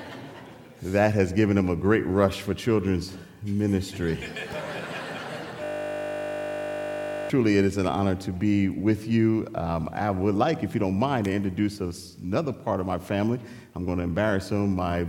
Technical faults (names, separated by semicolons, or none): system hang loop